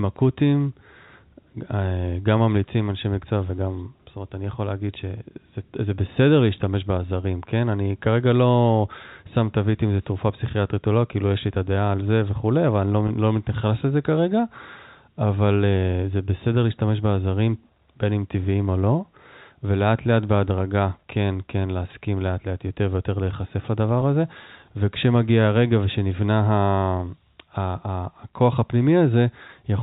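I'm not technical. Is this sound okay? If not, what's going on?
No. There is packet loss with pitch repetition at 13.08 and 24.00 seconds. Each time, about 20 ms of speech goes missing, and the last bit of voice is briefly repeated, giving a tiny buzzy hold.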